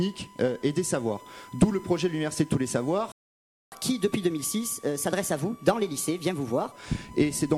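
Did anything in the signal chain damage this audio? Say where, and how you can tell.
Yes. A steady 1 kHz tone sits under the whole clip, about 25 dB below the signal. This is USB whine: bus frame current leaking through power or ground.

A playback stall silences the sound from 3.12 to 3.72 s, a 0.6 s gap, likely because the player's buffer ran dry or its thread was blocked.

Catch-up at higher speed follows from 3.72 to 6.72 s. The audio runs 1.15 times fast, about two semitones sharp, as the player resamples its backlog before returning to normal.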